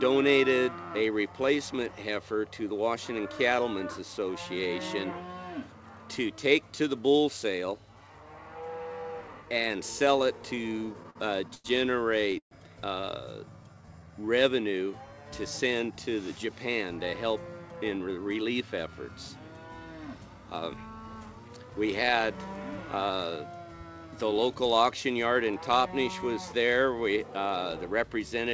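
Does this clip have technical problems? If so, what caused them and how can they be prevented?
Yes, there are several network-timing faults.

Repeated stalls (stutter) run from 10.55 to 11.67 s. Packets kept arriving late. The jitter buffer ran dry ten times. Each time the receiver stretched the last sound to fill the hole. About 223 ms was filled this way, roughly a fifth of that stretch. The longest hold lasted 92 ms. Nothing is lost, but the sound drags and stumbles. A larger or more adaptive jitter buffer, plus a steadier network link, would prevent this.

A call audio freeze follows at 12.38 to 12.54 s. The sound hangs, then fades, and about 100 ms of it is silent. In all, 129 ms is inserted. The audio then resumes where it stopped, so that much extra delay remains. The likely cause is a burst of packets held up in transit, which emptied the buffer. Reducing congestion on the path, for example with quality-of-service priority for call traffic, would prevent it.

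A jitter buffer slow-down spans 13.46 to 14.36 s. The buffer was running low and rebuilding its reserve. The receiver repeated tiny pitch-period slices many times. Playback ran at 84% speed with unchanged pitch. That added 152 ms, and sounds feel drawn out. A buffer target set high enough to absorb such gaps would remove the need for this catch-up.

Jitter buffer speed-up appears twice. The first is at 16.27 to 16.84 s, at 107% speed, removing about 50 ms. The second is at 17.30 to 19.34 s, at 108%, removing about 150 ms. The buffer held more than its target. The receiver trimmed short pitch-period pieces to cut the delay. Pitch stays the same, but the pace sounds hurried. More even packet delivery would avoid this trimming.

The audio passed through a G.722 call path at 64 kbps. Nothing is present above 8 kHz, which fits that wideband codec.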